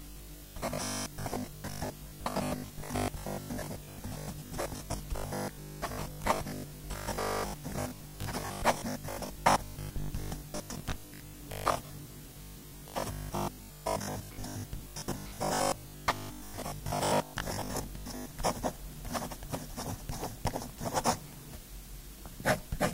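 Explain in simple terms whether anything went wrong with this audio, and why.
From 0.02 s to 18.34 s, the sound takes on a stiff, metallic buzz at 50 Hz. This is robotic sound from repeated short buffers. New audio likely arrived too late, so the playback kept repeating the last tiny slice instead of waiting. Each slice lasted about 20 ms, which fits the 50 Hz buzz. Roughly two thirds or more of that stretch is repeated material, so much of the real sound is skipped.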